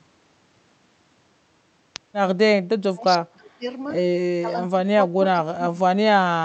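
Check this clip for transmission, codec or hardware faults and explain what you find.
One fault appears, twice. Speech suppressed in double talk occurs at 2.81 to 3.65 s and at 4.34 to 5.85 s. The echo canceller most likely could not separate the talker from loudspeaker echo while both sides spoke, so it attenuated both. Speech dips by up to about 25 dB.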